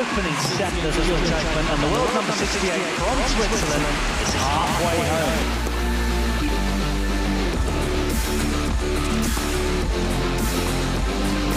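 A doubled audio track runs from 0.93 to 5.43 s: a full-band copy trails about 150 ms behind, roughly 5 dB quieter, likely from a second capture path. The waveform shows every onset repeated, and the spectrogram shows a dry, undecayed ghost that starts and stops abruptly.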